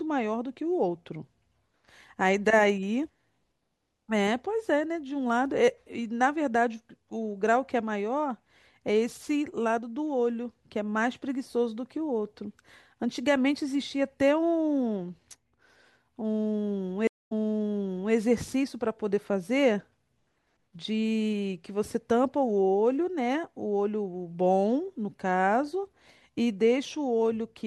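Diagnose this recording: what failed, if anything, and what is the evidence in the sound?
A stream reconnect occurs at the network stage, between 17.07 and 18.14 s. The speech stops, and about 0.18 s of silence follows. When the sound returns, it has jumped back about 0.89 s, so a short stretch of speech is heard twice. This is what happens when the connection drops and the player rejoins the stream. It starts a new decoder mid-stream, and the server resends recent audio, which the player plays again.

A bit error spike sits at 25.55 s. It is a single sharp tick, lasting one sample. It has no connection to the speech around it and spreads across the whole spectrum. The stage is the digital path: memory, storage or a digital link. One bit in one sample value flipped. The sample jumped by a power of two, then the next sample returned to the true waveform.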